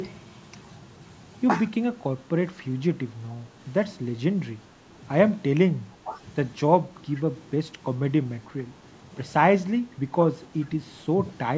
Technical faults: speech suppressed in double talk; echo leak

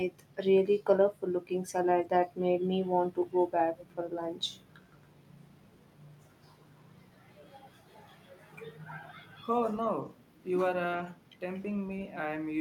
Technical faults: echo leak

